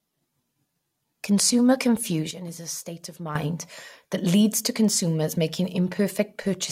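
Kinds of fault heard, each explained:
Sudden gain jump: At 2.31 s the level of the speech and its background noise drops together by about 11 dB, then returns at 3.35 s, with no ramp at either edge, likely from a gain setting applied instantly between samples.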